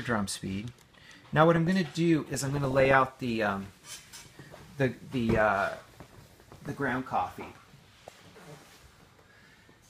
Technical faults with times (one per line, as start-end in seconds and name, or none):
0.77-1.70 DAB burbling
2.34-3.03 DAB burbling
6.00-6.97 DAB burbling